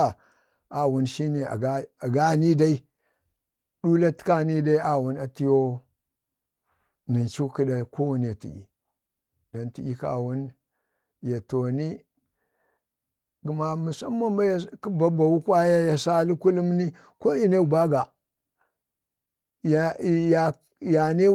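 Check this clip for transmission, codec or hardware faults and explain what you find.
No transmission, codec or hardware faults turn up in this clip.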